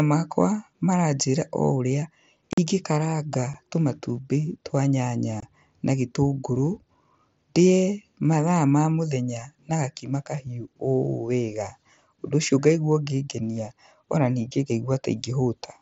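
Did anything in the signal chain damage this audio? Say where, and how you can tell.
Yes. Unconcealed Bluetooth headset packet loss on the headset-to-phone link leaves holes at 2.53–2.58 s, 3.54 s and 5.40–5.43 s. The waveform shows flat gaps with sheer edges. The spectrogram shows blank vertical slots with abrupt edges, because nothing fills in the missing packets.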